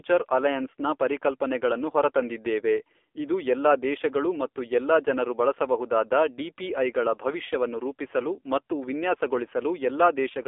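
From start to finish, the speech carries AMR narrowband mobile codec damage. The band is cut to roughly 300 Hz to 3.5 kHz, with nothing above 3.6 kHz. Coding at 7.4 kbps leaves the voice plainly buzzy and synthetic, like an older phone call.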